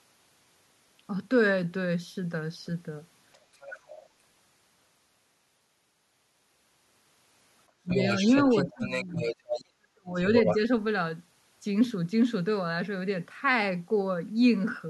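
A very faint second voice slips in from 3.33 to 3.38 s, then returns more clearly but still well below the talker from 3.55 to 4.02 s. This is the other side's voice leaking through, likely loudspeaker sound picked up by the microphone and not fully removed by the echo canceller. From 7.89 to 9.65 s that leak grows almost as loud as the talker. Around it, the talker's own voice dips sharply, by roughly 25 dB, from 7.83 to 7.96 s, and again by about 20 dB from 8.66 to 9.29 s. From 9.75 to 10.17 s it nearly vanishes. This is speech suppressed in double talk: with both sides talking at once, the canceller likely could not separate the talker from the echo and turned everything down. A last burst of the other side's voice, about as loud as the talker, comes through from 10.35 to 10.55 s.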